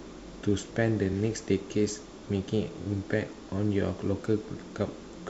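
At 1.12 s the speech stutters briefly: a block of about 23 ms plays twice, which points to a single compressed frame being repeated. The same repeated-frames fault returns at 2.81 s, this time with the block played three times through 2.86 s, adding 46 ms and producing a short stutter.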